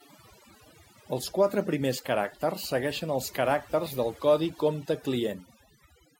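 Overdone noise removal runs throughout: bands near the noise estimate are cut away, leaving twinkling specks in near-silence, unlike a noise gate's whole-signal cutoffs.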